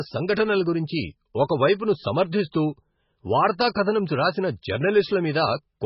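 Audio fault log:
Throughout: MP3 compression. The speech sounds watery and swirly, with a dull, muffled top where nothing survives above about 5.6 kHz, and the s sounds come through as metallic chirps while consonant attacks smear. The likely cause is heavy low-bitrate MP3 encoding, which fits roughly 16 kbps. Short of bits, the encoder cut the treble at a fixed point and dropped weak frequency components that flicker on and off from frame to frame.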